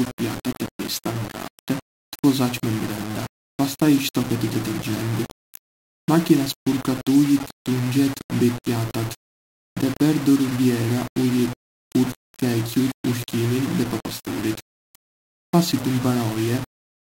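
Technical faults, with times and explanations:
Throughout: low bit depth without dither. The speech sounds grainy and rough, with distortion that rises and falls with the voice. It is likely a 5-bit signal rounded without dither, leaving error about 15 dB below the signal. The waveform shows coarse staircase steps, and the spectrogram shows broadband grit that tracks each syllable.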